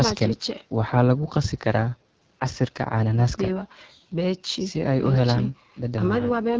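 Speech, coded throughout with the AMR wideband (HD Voice) codec at a low rate, plainly rough and raspy, which fits 8.85 kbit/s. A spectrogram shows detailed harmonics only up to 6.4 kHz, smeared noise-like fill between 6.4 and 7 kHz, and nothing above 8 kHz from the call's microphone processing.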